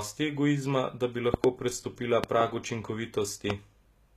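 Throughout the speech the treble sounds synthetic: s sounds and other high detail come across gritty and metallic, the coding damage is plainly audible, and nothing reaches above 14.9 kHz. The likely cause is HE-AAC compression at a low rate, which fits a bitrate around 20 kbps. Only the lower spectrum is actually coded. The upper bands are rebuilt by copying lower content upward and fitting it to a coarse envelope, so the high harmonics no longer match the real ones.

Three bursts of loud pops sit on top of the speech, which carries on beneath them. The first comes right after "egoizma da bi", a quick double pop from 1.34 to 1.46 s. A second double pop follows from 2.24 to 2.43 s, and a single pop lands at 3.50 s. Each stands out roughly 20 dB above the speech. They are likely voltage spikes from a plug, switch, static discharge or driver glitch, with the circuitry downstream shaping each pulse into a sharp crack.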